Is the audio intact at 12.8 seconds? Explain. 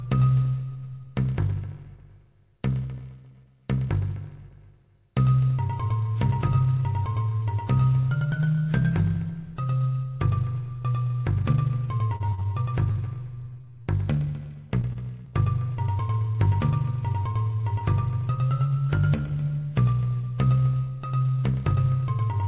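No. Repeated packet loss (robotic sound) runs from 12.16 to 13.87 s, covering 12.8 s. Ten gaps, the longest 37 ms, are each filled by continuing the preceding sound, so about 14% of that stretch is concealed and it sounds choppy and robotic.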